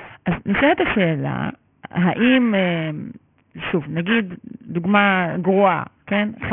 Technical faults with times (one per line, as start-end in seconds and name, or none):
0.00-6.53 aliasing